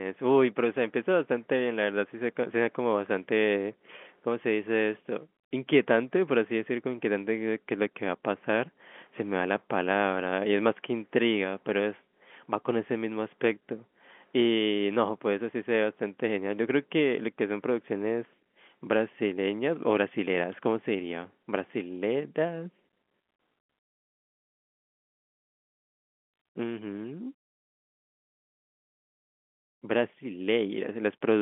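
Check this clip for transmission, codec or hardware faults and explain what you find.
No faults found.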